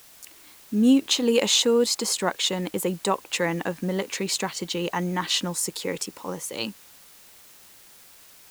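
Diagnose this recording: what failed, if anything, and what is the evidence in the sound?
A steady, even hiss sits under the speech from start to finish, roughly 25 dB below it, and it stays the same through words and pauses, with no gritty distortion on the speech itself. The failure is at sample-format conversion: low bit depth with dither. The signal was rounded to very few bits, which fits an 8-bit word, and the dither added first turned that rounding error into constant white noise rather than distortion.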